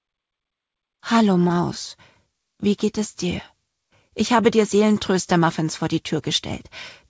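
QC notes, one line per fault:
1.48–1.51 s short concealed packet loss: roughly 20 ms of audio missed the decoder. The receiver extended the preceding sound, causing a brief smear.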